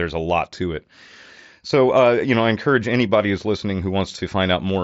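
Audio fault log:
No faults heard in this speech clip.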